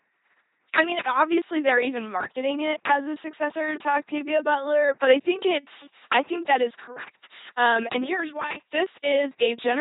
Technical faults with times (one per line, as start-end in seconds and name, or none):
0.00-9.80 LPC-10 vocoder